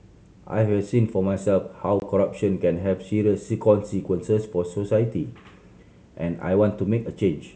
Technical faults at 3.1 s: none

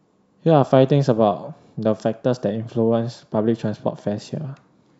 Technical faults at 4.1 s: none

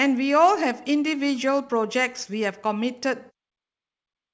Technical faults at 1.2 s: none

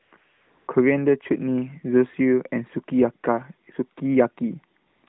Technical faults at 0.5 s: AMR comfort noise

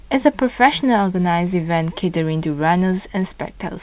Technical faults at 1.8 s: none

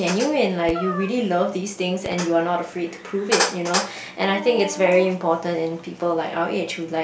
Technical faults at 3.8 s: none

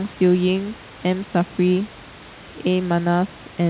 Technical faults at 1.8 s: none

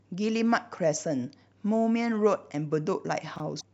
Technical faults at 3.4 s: chunks out of order

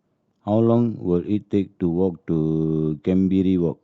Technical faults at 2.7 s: none

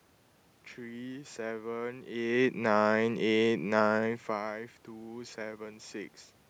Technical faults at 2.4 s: none

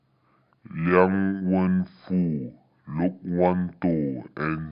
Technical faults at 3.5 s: wrong sample rate

